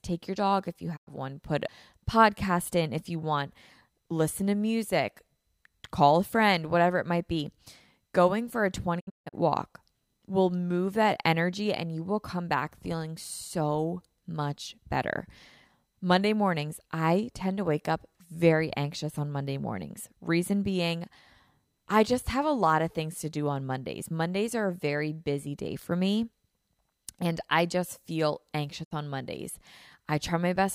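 Right at the start, around 0.96 to 1.09 s, there's a digital broadcast dropout. The receiver lost good frames and muted, so the speech fades out over about 20 ms and drops away for roughly 96 ms, which fits about three lost frames. Whatever was sent in that gap is simply gone, not smoothed over.

At 1.68 s, between "one put" and "podcast in if you", you get a CD skip. A knock or flaw on the disc sent the laser to another turn of the spiral, so there's a very brief mute. Then playback carries on from a different spot, which is why the speech lurches instead of flowing.

The worst dropout runs from about 8.99 to 9.35 s, right after "for a" and before "walk will move that". It's scattered, several short holes over about 320 ms. Around 256 ms is lost in total, and the longest single gap is 160 ms. That points to roughly eight bad frames. Each hole comes with the same 20 ms fade, so it sounds choppy and stuttering.

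The last one sits at about 28.83 to 28.93 s, just after "and I just feel". It's a brief 64 ms hole with the same quick fade, which suggests two lost frames.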